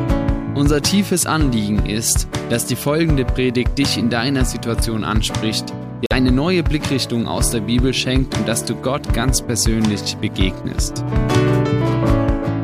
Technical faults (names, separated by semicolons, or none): Bluetooth dropout